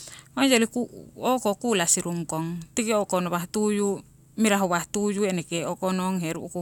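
No technical fault can be heard anywhere in the speech recording. Nothing in it calls for a timestamp or a note on a cause.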